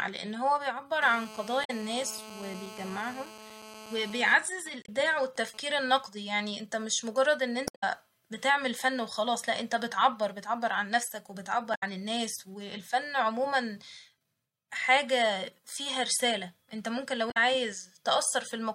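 From 1.02 to 4.34 s there's a GSM phone buzz under the speech: a raspy 217 Hz drone with lots of harmonics, about 16 dB down, steady because the phone's in a call. Inside it, from 1.61 to 1.70 s, comes the first patch of damaged data in a compressed stream. The decoder loses sync and hunts for the next frame. The same thing recurs at 4.82–4.89, 7.64–7.84, 11.71–11.83 and 17.28–17.37 s. From 4.35 to 5.84 s the buzz breaks into GSM signalling bursts, a quieter pattern of even ticks with a longer buzz twice a second while the caller goes silent.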